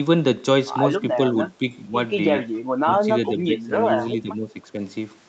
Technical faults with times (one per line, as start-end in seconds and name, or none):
1.51-1.66 speech suppressed in double talk
2.54-2.59 echo leak
2.84-3.72 speech suppressed in double talk
4.21-4.81 speech suppressed in double talk